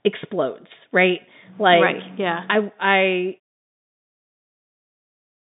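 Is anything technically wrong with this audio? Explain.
No, nothing here is technically wrong: the speech sits in an ordinary telephone band with nothing above 3.8 kHz, and the fade-out at the end is smooth, with no click or hard edge.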